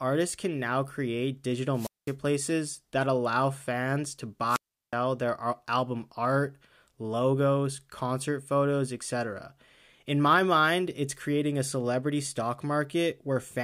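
At 1.73 s, just after "can now create", a burst of hiss swells and the speech drops into near silence for about 0.21 s before returning by 2.14 s. At 4.47 s, after "that allow fans to", the same happens with a longer hole of about 0.37 s, and the speech returns at "their album art logos" by 4.94 s. Both are wireless microphone squelch dropouts: the FM radio link fades, noise rises, and the receiver's squelch mutes its output until the signal recovers.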